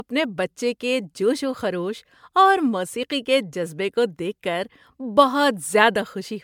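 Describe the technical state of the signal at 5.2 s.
At 5.2 s the speech sounds swirly and hollow, with smeared consonant onsets and a watery haze, a texture that runs through the whole clip rather than starting there. This is most likely generation loss: the audio appears to have gone through MP3 coding around five times, consistent with a 128 kbit/s setting. Each re-encode quantised the signal on a shifted frame grid, stacking noise and spectral holes, with nothing above 20 kHz.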